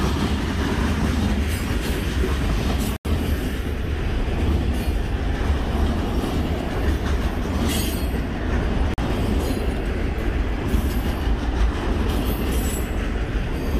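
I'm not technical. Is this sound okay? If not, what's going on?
No, there are two short gaps. At 2.96 to 3.06 s the audio cuts out for about a tenth of a second, and again at 8.94 to 8.99 s for about half that. Each time it drops to silence and comes back further along, as if it kept playing while you couldn't hear it. That's most likely a Bluetooth dropout: some wireless packets arrived too late for the headphones and were thrown away.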